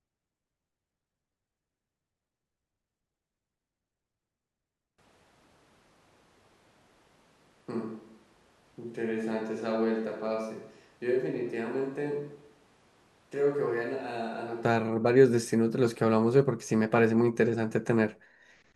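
A switch to a distant microphone runs from 4.98 s to 14.65 s. At 4.98 s the speech abruptly turns roomy and hollow, loses bass, and drops by roughly 10 dB, while room noise rises to around 30 dB below the speech. At 14.65 s the close, full sound returns just as suddenly. The likely cause is that the close microphone's signal failed or was left out, so a farther microphone carried the recording for that stretch.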